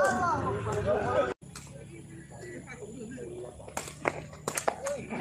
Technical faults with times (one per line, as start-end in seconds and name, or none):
0.00-5.21 clock drift between sender and receiver
0.24-4.67 repeated timing corrections